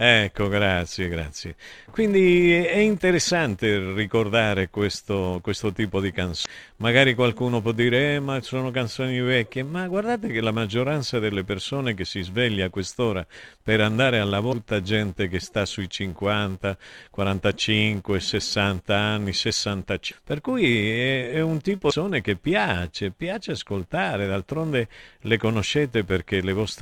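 Speech runs through a filter restarted on every block for the whole recording. Each processing block starts from a cleared state instead of continuing from the previous one, so a small transient lands at every boundary. Together these form a steady buzz at 375 Hz, which fits a 128-sample block, and it rises and falls with the speech level because the transients scale with the signal. Separately, damaged data in a compressed stream produces four brief blips. The first is at 6.42 to 6.46 s, after "questo questo tipo di". The second is at 14.49 to 14.53 s, between "quest'ora per andare a" and "gente che sta sui". The third is at 20.08 to 20.12 s. The fourth is at 21.88 to 21.93 s, between "cui è è un" and "che piace piace". At each one the decoder hits corrupted frames, loses sync and resumes at the next valid header, giving a short chirp, squawk, click or hole.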